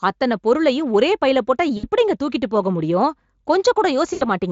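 At 1.77 to 1.85 s, right after "பொருளையும் ஒரே பைல போட்டா" and before "எப்படிங்க தூக்கிட்டுப் போக", and again at 4.13 to 4.29 s, there is VoIP packet loss concealed by the speech codec. About 60 ms and then 80 ms of audio never arrived, which fits three and four 20 ms frames. The decoder extended its last pitch and spectral shape while lowering the gain, so each gap becomes a buzzy tone or coloured noise that fades rather than dropping to clean silence as a plain dropout would. The speech stays weak or distorted for a moment after packets return.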